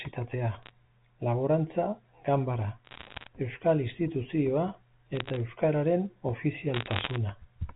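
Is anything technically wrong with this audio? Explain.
Yes, there are bit errors on a digital phone line in four bursts: 0.63 to 0.71 s, 2.85 to 3.28 s, 5.15 to 5.36 s and 6.74 to 7.16 s. The last burst is the densest, at around one percent, and the others are lighter, under one percent. On a G.711 mu-law line, each flipped bit corrupts one 8-bit sample. When the sign bit or a high-order bit is hit, the sample jumps far from its true value, so the speech carries sharp ticks that gather into crackle. On the waveform these show as isolated single-sample spikes standing out from the speech envelope. On the spectrogram they appear as thin vertical lines running the full height of the band, which ends at 4 kHz because of the telephone coding.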